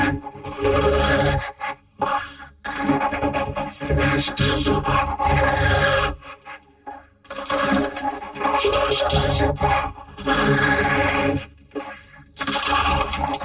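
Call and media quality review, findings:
No audible faults found in this recording.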